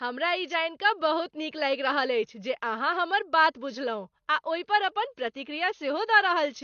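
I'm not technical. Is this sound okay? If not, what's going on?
No. AAC compression artefacts run throughout: the speech sounds dull and smeared, with nothing above 6.6 kHz, likely because the encoder discarded fine detail to save space.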